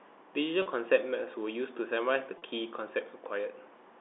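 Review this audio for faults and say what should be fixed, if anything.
Packet loss with pitch repetition at 0.62 s and 2.38 s: each gap lasts 40 ms, which fits two consecutive packets going missing. The receiver bridged it by looping the last pitch period, so the speech briefly holds on a slightly buzzy note before resuming. Sending redundant or forward-error-corrected packets over the G.711 link would let the receiver rebuild these gaps instead of concealing them.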